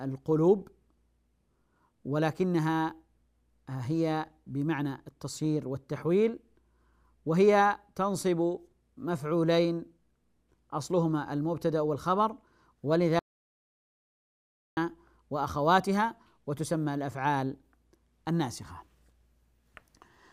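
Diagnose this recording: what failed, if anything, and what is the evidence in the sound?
Audio dropout to silence from 13.19 to 14.77 s: about 1.6 s of dead silence, no room tone. Likely a lost input link upstream of the recorder.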